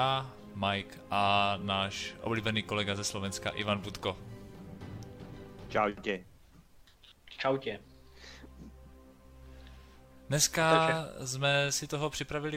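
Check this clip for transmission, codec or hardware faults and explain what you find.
Nothing here stands out as a transmission, codec or hardware problem; it all sounds just as it should.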